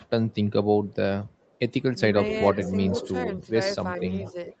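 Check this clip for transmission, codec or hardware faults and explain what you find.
Two call faults appear in the speech: an echo leak in four places and speech suppressed in double talk in two.

Echo leak, at 1.45–1.59 s, 2.3–3.1 s, 4.01–4.32 s and 4.48–4.56 s. The far end was likely on a loudspeaker, and its echo canceller let part of what its microphone picked up go back down the line. A delayed copy of the voice, trailing by about 419 ms, comes through. It is barely audible at 1.45 s, clear from 2.3 s and strongest around 4.0 s, about 10 dB under the speech.

Speech suppressed in double talk, at 2.54–2.59 s and 3.26–3.45 s. With both sides active at once, the echo canceller likely could not tell the talker from the returning echo and turned the signal down. The voice dips by about 10 dB for a brief moment at 2.54 s, during the loud echo stretch. At 3.26 s it sags more gently, about 5 dB, for roughly a tenth of a second. 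Both dips make the voice sound momentarily pulled back.

The audio also shows the normal limits of the call path. Nothing above 8 kHz comes through, which fits wideband Opus at around 32 kbps.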